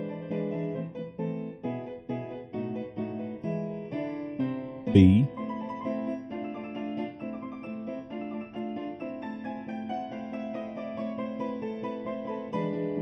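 Channel delay (comb filtering) runs through the whole clip: one channel arrives roughly 0.4 ms late, so summing to mono cancels evenly spaced frequencies from around 1.5 kHz upward. The hollow, phasey tone comes from fixed notches rather than a smooth treble roll-off.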